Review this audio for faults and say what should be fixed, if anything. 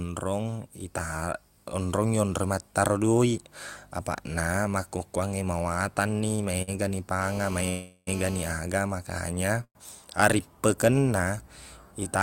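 At 6.35 to 6.40 s and again at 6.62 to 6.70 s the speech briefly hangs, with a sound drawn out for about 28 ms and then 54 ms before carrying on intact. These are short stalls from a late packet: the jitter buffer ran dry, so the receiver stretched the last sound until the data arrived, adding that much delay without losing any speech. A deeper or adaptive jitter buffer would absorb these small arrival delays.

From 7.22 to 8.52 s a hard, raspy GSM phone buzz sits under the speech at about 16 dB below it. It is a steady 217 Hz tone with many harmonics, caused by a nearby 2G phone on a call whose radio bursts are rectified in the audio circuitry. Keeping phones away from the microphone and cabling, or using better shielded and filtered inputs, would stop it.

At 7.70 to 8.09 s, and more briefly at 9.64 to 9.77 s, the audio turns into a fading buzz or hiss that drops to silence, for about 40 ms and then 80 ms, before speech resumes where it stopped. 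This call audio freeze was likely caused by packets held up in transit, which emptied the jitter buffer for 373 ms and 110 ms, inserting gaps rather than dropping speech. A more stable network path or a larger jitter buffer would prevent it.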